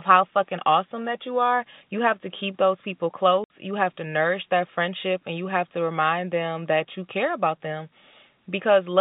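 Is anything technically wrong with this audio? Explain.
Yes. At 3.44 s, right after "to keep those people", the speech drops out abruptly into dead silence for about 60 ms, with hard edges where the waveform is cut off and then restarts. This is packet loss filled with silence: packets never reached the receiver, so it played silence in their place. The gap's length fits three consecutive 20 ms packets going missing. The telephone-band sound, limited to roughly 150 Hz to 3.7 kHz, comes from the G.711 line.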